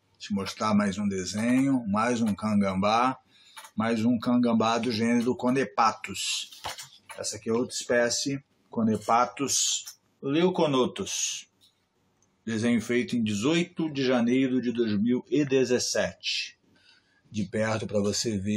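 Nothing stood out as a technical problem on listening to the recording.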